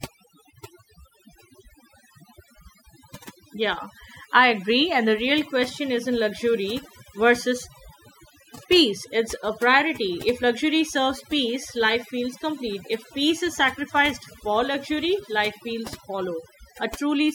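A speech recording with overdone noise removal running throughout: the denoiser was set so hard that bands near its noise estimate get pulled down or switched off. The quieter parts of the voice vanish with them. The background drops and breaks up into twinkly specks.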